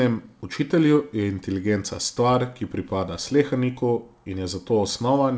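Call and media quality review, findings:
Nothing stood out on listening to this speech over the call path, whose top end stops at 8 kHz, consistent with a wideband G.722 link at 64 kbps.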